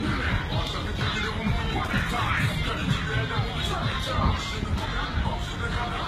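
Throughout the sound, nothing reaches above 15 kHz, and two sets of codec smearing and swirl sit on top of each other. This is likely transcoding between lossy codecs: it fits a low-rate HE-AAC encode followed by Vorbis, with the second encoder reproducing the first one's artefacts.

From 1.84 to 2.30 s there is an irregular burst of scratchy crackle. That is loose connector crackle: a worn or dirty contact repeatedly breaking and remaking the signal path, chopping the audio.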